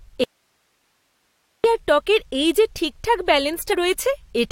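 Audio dropout to a faint residue, from 0.24 to 1.64 s: about 1.4 s of speech vanishes abruptly, leaving only hiss roughly 50 dB below the signal until it snaps back at "আর টকের এই যে". The likely cause is the wanted signal being lost while the downstream path stayed live.

Compressed frames skipped, from 3.72 to 3.74 s, right after "টকের এই যে ঠিকঠাক": the audio jumps ahead by roughly 50 ms, which fits about two dropped 23.2 ms codec frames.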